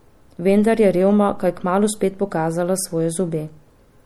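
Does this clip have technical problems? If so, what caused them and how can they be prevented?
Yes. Throughout, the speech sounds watery and swirly, with dulled treble and smeared s sounds. This is likely MP3 compression starved of bits, consistent with about 64 kbps. Encoding at a higher bitrate, or keeping an uncompressed master, prevents it.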